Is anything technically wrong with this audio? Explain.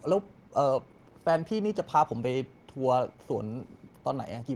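No, nothing technically wrong stands out in this short bit of speech, so there's no fault to walk through here.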